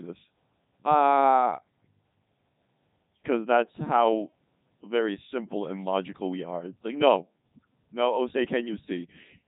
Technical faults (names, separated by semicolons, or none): Codec 2 vocoder